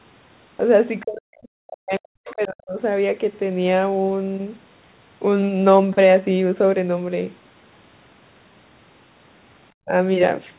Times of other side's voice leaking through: 2.26-2.35

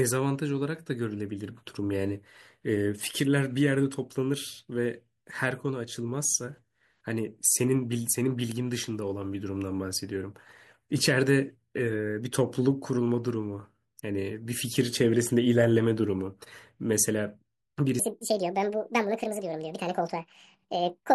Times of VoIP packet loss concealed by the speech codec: none

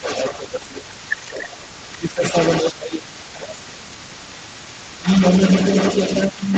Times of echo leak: 0.00-6.57

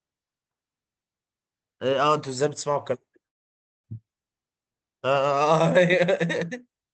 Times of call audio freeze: 3.27-3.86

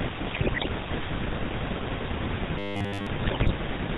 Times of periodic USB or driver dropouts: 1.94-3.93

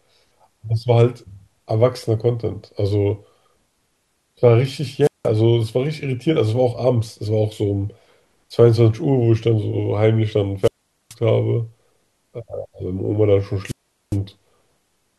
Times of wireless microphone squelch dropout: 5.02-5.28, 10.62-11.15, 13.64-14.17

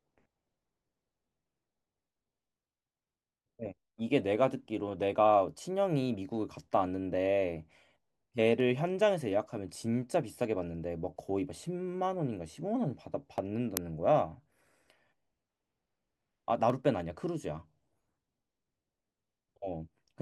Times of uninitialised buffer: 13.77

